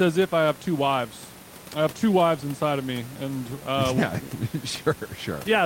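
The speech signal has no technical faults, with only the room's own background noise audible at about 23 dB below the voice.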